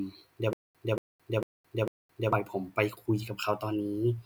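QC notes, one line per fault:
0.53–2.33 s, stutter with silent gaps: the same burst of speech, about 233 ms long, plays four times at an even 449 ms pace, with roughly 216 ms of dead digital silence after each pass. The rigid rhythm and clean cut to silence point to a stalled player or stream that likely kept re-issuing its last buffered fragment on each retry and then ran dry. The speech that belonged in those gaps never arrives.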